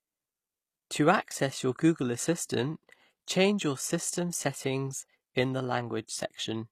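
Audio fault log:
throughout: HE-AAC compression, likely; treble is rebuilt from copied lower bands, so s sounds turn gritty and metallic, nothing above 15 kHz, which fits about 24 kbps.
6.07 s: pre-echo just after "system settings in the"; codec noise spreads about 18 ms ahead of a sharp attack, adding brief hiss and softening its onset.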